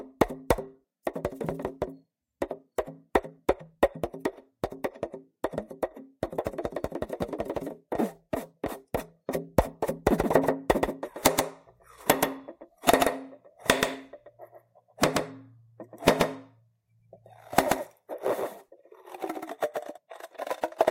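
From 10.19 s to 19.97 s, every event in the sound is followed by a second, identical copy roughly 150 ms later and a few decibels quieter. The effect is a flat slapback with no decay or room colour, switching on and off abruptly at those two points. This is a doubled audio track, most likely caused by the same audio being captured again through a slower path, or by an edit that left two copies out of step.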